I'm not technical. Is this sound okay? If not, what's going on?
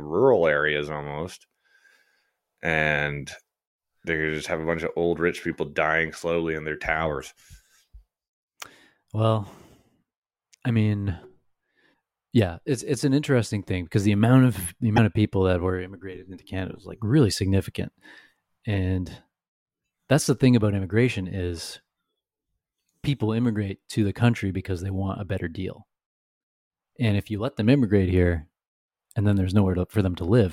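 No. The speech jumps ahead, with a brief chirp, noise burst or short gap, at 11.93 s and from 14.96 to 14.99 s. This is likely a broken MP3 bit reservoir: after a missing chunk, the next chunk reads the wrong leftover data and garbles for a moment.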